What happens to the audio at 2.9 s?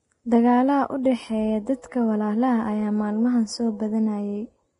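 At 2.9 s you're hearing the same heavy compression damage that runs through the whole speech clip, most likely Vorbis compression at a low setting, which fits something around 28 kbps. Nothing survives above about 10.6 kHz, and the treble that remains is quantised so coarsely that fine detail turns into noise of similar energy. So it comes across hissy and grainy, with consonant attacks smeared and tonal parts roughened.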